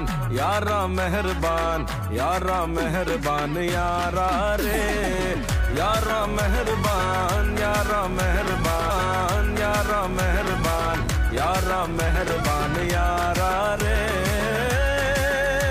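At 8.90 s the audio jumps back and replays itself through 10.89 s, a stream segment repeated: the player fetched or queued the same chunk twice, adding about 2.0 s of duplicated material, with a small audible blip where the playback skips backward.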